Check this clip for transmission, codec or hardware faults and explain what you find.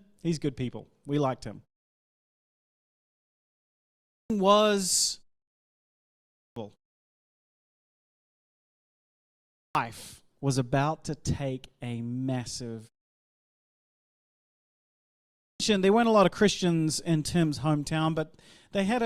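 The clip has one hardware fault: a clipped start after a pause. It occurs seven times, at 2.87, 3.73, 5.94, 7.88, 9.20, 13.39 and 14.97 s. Each time the output device has dozed off during the preceding pause and takes time to wake. About 0.55 to 0.65 s of speech is swallowed, so the speech bursts in abruptly, already mid-word.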